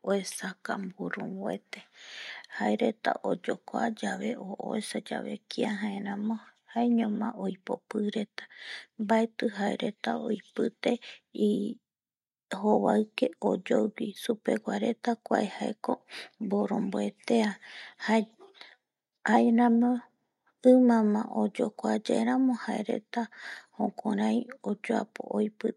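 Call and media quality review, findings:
No call or media quality findings for this speech recording.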